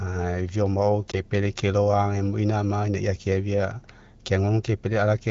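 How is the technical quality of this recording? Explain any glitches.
One glitch stands out over the light coding texture of the AMR-WB wideband codec: a lost AMR speech frame between 1.11 and 1.20 s. The decoder reused its last pitch and vocal tract settings at falling gain, which fits a single missing 20 ms frame, producing a brief dip or warble. A spectrogram shows momentarily smeared, flattened harmonics, and the waveform shows a short amplitude notch.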